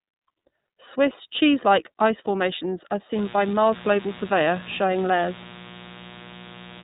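Throughout, iLBC codec coding, which fits 30 ms frames at 13.33 kbps, leaves the speech audibly rough and synthetic. The spectrogram shows nothing above 3.8 kHz.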